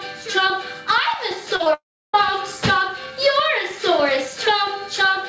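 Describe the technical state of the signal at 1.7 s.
At 1.7 s the signal sits in a cluster of short concealed packet loss leading straight into a long network dropout. Two brief gaps come first, at 1.56 to 1.61 s and 1.63 to 1.68 s, each a few tens of milliseconds the decoder never received. The receiver covered each one by extending the preceding sound and blending back, so they come across as a quick smear or wobble. On a spectrogram they show as short patches of unnaturally smooth, repeated texture, with a small kink in the waveform envelope.

From 1.74 s to 2.15 s the sound stops being real. It first continues as a buzz or hiss that fades within about 0.08 s, then goes to silence. The waveform flattens and the spectrogram shows a fading smear, then an empty column, before the audio resumes at 2.15 s with that stretch skipped. The cause is likely a network outage of roughly 0.4 s. Throughout, nothing appears above 8 kHz, consistent with the G.722 call codec.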